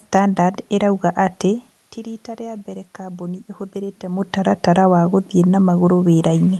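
Right after "stanadard ĩrauga atĩ", at 1.95 s, you get automatic gain rising that runs until about 4.63 s. The level at the mic had dropped by about 14 dB, which fits the talker easing away from it around 1.5 s, so the gain control started pushing its gain up, by about 4 dB in the end. It's slow, so you hear the voice and the room noise swell together rather than jump.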